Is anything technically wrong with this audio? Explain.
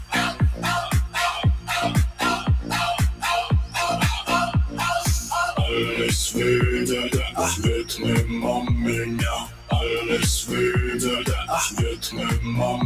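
Yes. Throughout the clip the level pumps and thins, with sustained parts and tails sinking by around 10 dB while sharp onsets come through. This is a noise suppressor applied to music or sounds: a speech-tuned processor mistakes steady tones and ambience for noise and pulls them down.

The same suppressor also produces distinct dips, heard as sound cut by the noise suppressor at 0.33–0.64 s (about 9 dB), 2.39–2.71 s (about 6 dB), 9.43–9.72 s (about 13 dB) and 11.95–12.19 s (about 11 dB). Each is a brief hollow sag or clipped decay, where the processor judged that stretch to be noise and attenuated it more than its surroundings.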